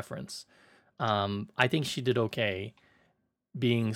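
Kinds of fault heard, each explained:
Drift correction step: software matching two clocks likely stepped the playback rate up by 5.3% to rebalance its buffer, so from 1.0 to 1.87 s the speech runs faster and 89 cents sharp, nearly a semitone, then snaps back just before "she did okay".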